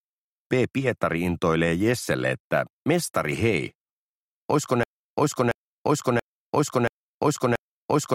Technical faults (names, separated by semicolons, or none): broken-record loop